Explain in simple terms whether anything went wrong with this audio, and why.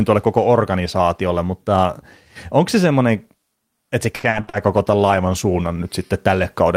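Repeated packet loss (robotic sound) runs from 4.15 to 4.55 s, right after "että se". Bits of the audio went missing in several short holes, each patched by stretching the previous sound. About half of that stretch is patched, so the speech turns choppy and robotic.

A call bitrate drop follows at 4.57 to 5.87 s. The connection seemed to weaken, so the call squeezed the speech into far less data for over a second. The speech sounds rougher and more muffled until the quality recovers.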